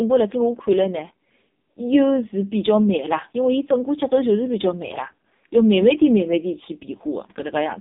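AMR narrowband mobile codec damage runs through the whole speech clip: nothing survives above 3.8 kHz, the band sits between 250 Hz and 3.7 kHz, and heavy buzzy, synthetic coloration fits AMR-NB's lowest modes, around 5.15 kbps, rebuilding the voice from few pulses per frame.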